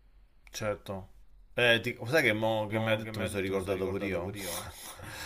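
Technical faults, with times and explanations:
2.70 s to the end: doubled audio track. The speech was most likely picked up a second time through a slower path, so a second full-band copy trails the first by roughly a third of a second, a few decibels quieter. The copy switches on abruptly, with no fade and no room colour or decay, so every syllable is followed by a clean, slightly softer repeat. The result is a hard slapback rather than natural echo.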